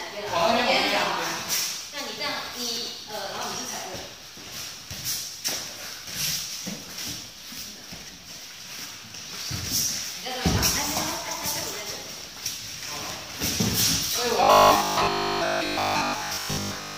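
From 14.43 s to 16.97 s, new audio likely stopped arriving often enough, so playback kept repeating its last short buffer while the real audio was skipped, the classic robotic sound from repeated short buffers. The repeats fall every 20 ms, which fits a buffer of about that length and stamps a fixed 50 Hz buzz onto the sound. With most of the material in that stretch being repeats rather than fresh audio, it turns rigid and metallic, only loosely tracking the underlying sound.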